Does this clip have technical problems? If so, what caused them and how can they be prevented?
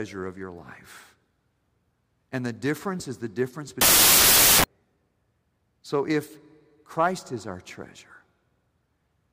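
Yes. From 3.81 to 4.64 s, just after "difference is the difference", 16-bit integer samples were read back as packed 24-bit integers, a wrong sample width. Many values are built from mismatched bytes, so the speech sinks beneath loud noise, played 1.5 times too fast with raised pitch. Carrying the sample format explicitly alongside the data, and checking it wherever audio is decoded or passed between buffers, prevents this.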